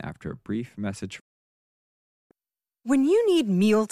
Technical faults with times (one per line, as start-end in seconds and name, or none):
1.19-2.31 digital broadcast dropout